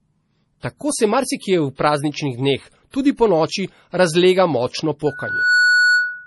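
Throughout, nothing is present above 11.5 kHz, with smeared, swirly detail. This is likely low-bitrate audio saved at a high bitrate, pointing to an original MP3 near 32 kbit/s. From 5.06 s to the end, a loudspeaker feedback squeal appears: a 1.5 kHz tone from the microphone-loudspeaker loop swells over about half a second to roughly 5 dB above the speech.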